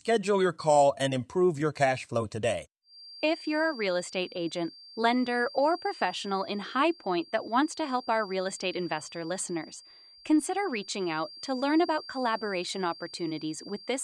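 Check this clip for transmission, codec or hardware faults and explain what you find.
There is one fault in this speech clip: a feedback whistle from 2.81 s through to the end. A thin, steady tone near 4.7 kHz sits behind the speech, roughly 20 dB quieter than it, and swells and fades slowly in level. The likely cause is a loudspeaker-to-microphone loop held just at the edge of feedback, so one frequency keeps ringing without building up. That wavering, and its failure to grow into a runaway howl, set it apart from a fixed electrical tone.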